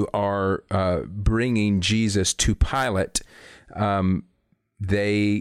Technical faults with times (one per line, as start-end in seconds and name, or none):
none